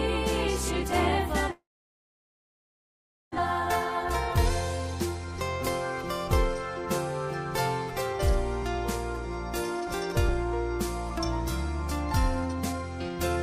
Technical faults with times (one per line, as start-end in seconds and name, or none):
1.51-3.40 long network dropout
3.47-4.07 jitter buffer speed-up
4.83-5.32 jitter buffer speed-up
9.77-10.46 jitter buffer speed-up
12.41-13.42 jitter buffer speed-up